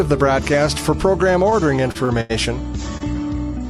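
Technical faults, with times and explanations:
1.50–1.54 s, 1.92–1.97 s, 2.05–2.11 s, 2.21–2.31 s and 2.97–3.02 s: short stall from a late packet. The sound briefly hangs with a faint buzz or dip, for 18, 30, 40, 88 and 27 ms. Each time, a packet arrived late and the jitter buffer ran dry. The receiver stretched the last audio until the packet arrived, then resumed where it left off, so nothing is lost.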